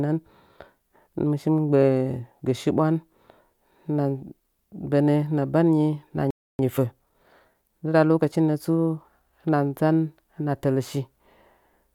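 At 6.31 s the player likely ran short of data or had its thread blocked, causing a playback stall: the speech cuts to silence for about 286 ms before resuming at 6.59 s. From 6.59 s to 9.43 s, time-compressed catch-up trims the backlog by splicing out small pieces, so the speech runs hurried at 1.1 times speed, pitch unchanged.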